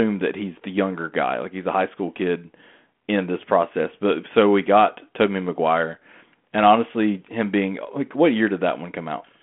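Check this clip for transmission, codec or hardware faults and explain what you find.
I find no transmission, codec or hardware faults in this clip.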